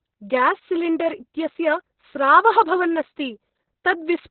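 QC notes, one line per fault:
throughout: Opus voice compression. The SILK speech coder is running at a very low rate, pointing to about 6 kbps, and has narrowed the band so nothing remains above 4.2 kHz. Coarse excitation coding leaves the speech heavily muffled, hoarse and faintly robotic.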